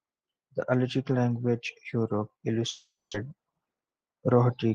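From 2.69 to 3.15 s, a long network dropout: the sound is stretched into a fading buzz, then silence, and resumes with part of the speech missing, likely from lost packets. From 3.73 to 4.29 s, a jitter buffer speed-up trims pitch periods, so speech runs 108% fast at unchanged pitch, about 50 ms removed.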